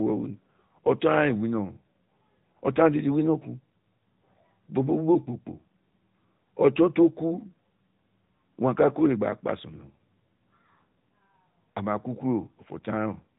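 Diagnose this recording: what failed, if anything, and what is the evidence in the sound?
Codec stage: the AMR narrowband mobile codec runs throughout. The spectrogram stops sharply at 3.8 kHz, and its pulse-driven vocal-tract model gives plainly buzzy, synthetic speech, suggesting a mid-rate mode near 10 kbps.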